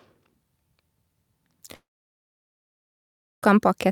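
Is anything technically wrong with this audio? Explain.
Yes. From 1.75 s to 3.44 s the sound trails off in a short fading buzz, then stays silent for about 1.6 s before resuming with roughly 1.7 s lost. This is likely a long network dropout, with the receiver concealing briefly before giving up.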